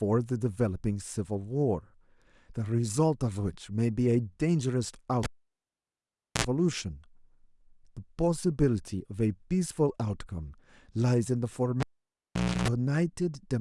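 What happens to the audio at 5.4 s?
A cable pulled and plugged in, from 5.23 to 6.44 s: a pop, 1.16 s of near-flat waveform, a 65 ms 60 Hz buzz showing harmonic stripes, then a return pop.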